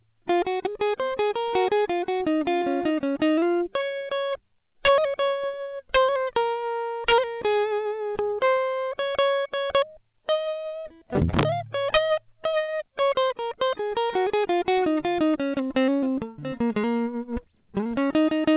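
Integer overflow first hits the music at 4.85 to 4.89 s, pushed about 5 dB past full scale, and returns at 5.94 to 5.97 s (about 4 dB) and 7.08 to 7.13 s (about 5 dB). Instead of being limited, each loud peak wraps around to the opposite extreme of the sample range, so these moments sound like harsh, violent cracks, far sharper than ordinary clipping.

Short concealed packet loss follows at 8.30 to 8.34 s, where about 20 ms of the call arrived too late and the receiver improvised roughly 15 ms by extending the preceding sound before crossfading back, leaving a brief smear.

Another integer overflow crack lands at 9.75 s, from a peak sitting right at the limit.

Short concealed packet loss strikes again at 10.80 to 10.86 s, bridging a 40 ms hole with 40 ms of continued sound, heard as a short wobble.

Integer overflow then recurs at 11.39 to 11.43 s (about 4 dB over) and 11.94 to 11.97 s (about 6 dB over).

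A final short concealed packet loss at 12.64 to 12.70 s covers a 40 ms gap with about 45 ms of synthesized continuation, smearing the music again.

Throughout, the call path passes nothing above 4 kHz, which fits 64 kbps G.711 mu-law.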